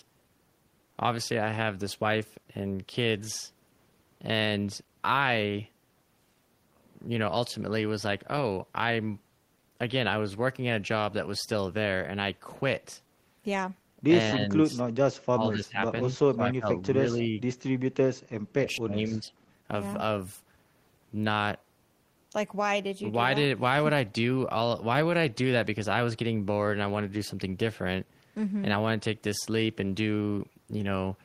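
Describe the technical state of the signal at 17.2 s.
At 17.2 s you're in the middle of a dip, from 16.94 to 17.41 s, that looks like speech suppressed in double talk. The level drops by around 5 dB, patchily, for roughly a third of a second. It's likely the echo canceller mistaking both talkers for echo and pulling everything down.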